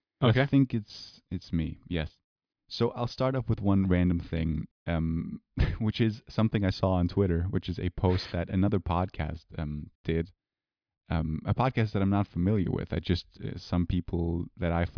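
Nothing goes wrong anywhere in this speech recording, so there's no technical fault to point to at any moment.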